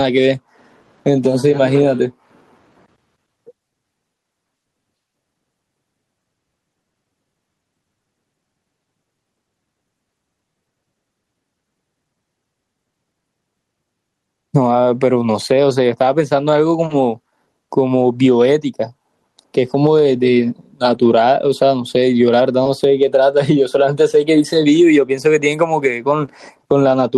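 Throughout the speech, the level breathes. The swing is around 10 dB. This is gain pumping. The likely cause is input gain set far too high for the microphone, with a fast limiter or compressor clamping down whenever the sound peaks. Loud and quiet passages sit closer together than they should. The whole recording sounds squashed.

From 19.65 to 19.71 s, the sound turns briefly rough and grainy. There is no gap. This is a lost packet rebuilt from error correction. The audio here never arrived, but the following packets carried low-bitrate copies of it, and the decoder played those instead. The rebuilt stretch lasts 40 ms, which fits two separate 20 ms packets. At 20.93 to 21.07 s the same thing happens over a longer run of 80 ms.

At 26.25 to 26.29 s there is a short concealed packet loss. About 20 ms of audio failed to arrive in time. The receiver bridged roughly 18 ms of it by extending the preceding sound before blending back into real audio. 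It comes across as a tiny smear. From 26.27 s, the last 20 ms of that window was also rebuilt from an error-correction copy. That gives the end of the event a rougher edge.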